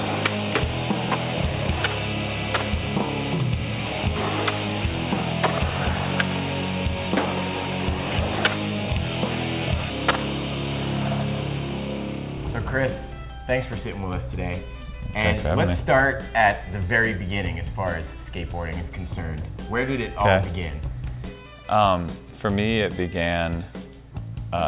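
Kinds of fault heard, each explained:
No faults detected; the audio passes through a standard call path whose narrowband codec leaves nothing above 4 kHz, as expected for that link.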